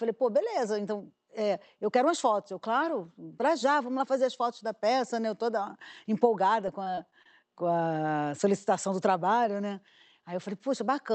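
Repeated packet loss (robotic sound) hits this speech recording from 6.66 to 7.26 s, just before "com a solicitação do". Packets went missing in quick succession, and each short hole, the longest about 23 ms, was patched by stretching the preceding sound, so roughly 15% of that stretch is concealment. The result is a choppy stutter. The audio passed through an Opus call path whose 8 kHz bandwidth limits the top end.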